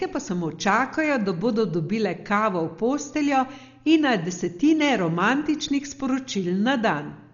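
Speech throughout sounds dull and rough, likely from heavy Dolby Digital compression at a bitrate near 40 kbps; its spectrogram shows nothing above 6.9 kHz.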